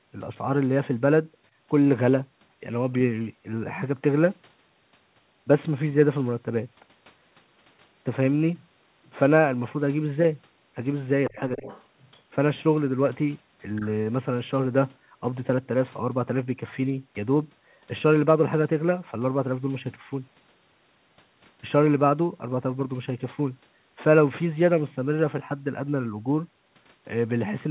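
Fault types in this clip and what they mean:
Other side's voice leaking through: faint scraps of a second voice, about 20 to 25 dB under the talker, near 11.3, 11.7 and 13.8 s, likely uncancelled loudspeaker echo.
Speech suppressed in double talk: the talker dips by up to about 15 dB for roughly a third of a second around 11.3 to 11.7 s, likely from echo cancellation.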